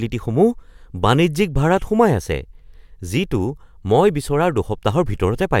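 A short bit of speech, and nothing technically wrong turns up anywhere in it.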